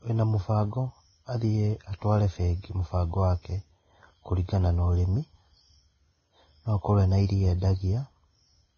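Throughout the speech, the audio was likely squeezed through Vorbis compression at a very low rate, which fits a bitrate near 17 kbps. Nothing survives above 6.5 kHz, and the coarsely quantised treble turns into hissy, grainy noise, roughening tones and blurring consonant attacks.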